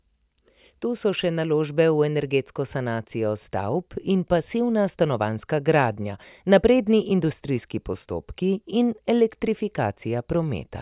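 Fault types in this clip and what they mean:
No faults can be heard anywhere in this speech.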